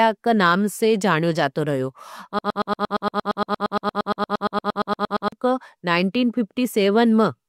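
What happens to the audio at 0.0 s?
Nothing goes wrong at 0.0 s; the audio is intact at that moment.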